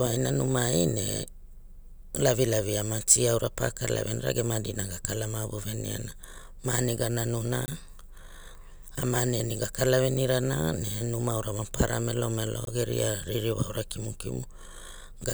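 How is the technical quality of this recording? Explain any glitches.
The speech is interrupted twice by a block of digital silence, from 7.66 to 7.68 s and from 12.65 to 12.67 s. Each gap lasts about 21 ms, which fits a missed 1024-sample buffer that was output as zeros. The sound drops out and returns abruptly, so each gap is heard as a brief hole.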